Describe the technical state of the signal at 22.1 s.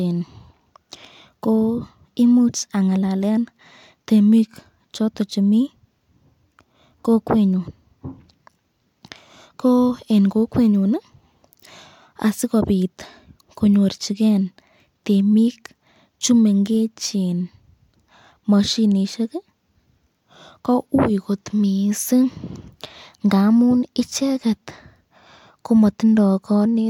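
At 22.1 s the speech signal is intact, with no dropout, distortion or other fault audible at that moment.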